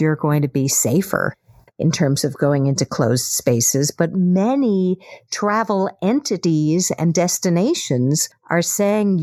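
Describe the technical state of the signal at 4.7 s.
Channel delay (comb filtering) is present at 4.7 s, as it is across the whole clip. One channel runs a fraction of a millisecond behind the other, and when the two are folded to mono, the content they share cancels at regularly spaced frequencies. The first notch sits around 3 kHz, so the speech at this point sounds hollow and phasey, with a fixed dip carved out of the upper presence range.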